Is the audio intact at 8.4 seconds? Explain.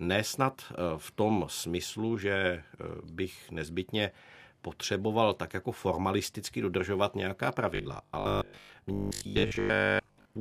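No. At 8.4 seconds the speech is caught in robotic sound from repeated short buffers. This runs from 7.75 s, just after "jako formalisticky dodržovat nějaká", to 10.39 s. The likely cause is new audio arriving too seldom, so playback loops a tiny slice of the last audio to fill the gaps. The steady 50 Hz buzz fits a 20 ms slice repeated over and over. Most of the audio in this span is such repeats. The voice becomes a rigid, metallic drone that only loosely tracks the speech.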